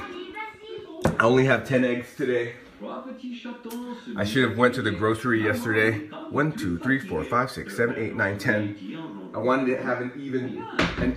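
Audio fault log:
No technical faults can be heard anywhere in the clip; the signal holds steady and continuous throughout.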